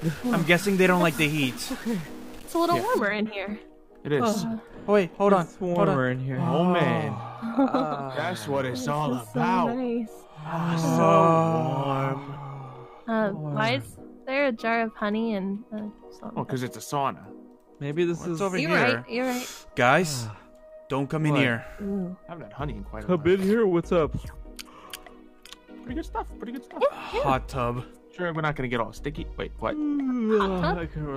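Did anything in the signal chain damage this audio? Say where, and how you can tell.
Yes. A stuck bit affects the first 3.0 s, from 0.00 s onward, most likely at the converter or in the digital wiring feeding it, where one data line is held at a fixed value. Whenever the true sample disagrees with that bit, the value jumps by a fixed step of roughly -40 dBFS, following the waveform's shape. This produces a harsh, buzzy grit over the sound, and quiet gaps fill with a steady noise floor at about that level.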